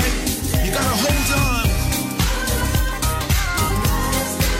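No technical faults can be heard anywhere in this recording.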